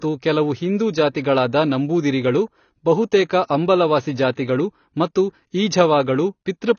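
From start to end, the speech carries what is likely AAC compression, with plainly audible codec damage. Nothing reaches above 6.6 kHz, and the sibilants turn fizzy and smeared rather than crisp, which fits AAC-LC at a low bitrate near 24 kbps quantising its frequency lines too coarsely. A simple low-pass filter would also dull the top but leave what remains clean; here the warbling texture inside the passband marks a lossy codec instead.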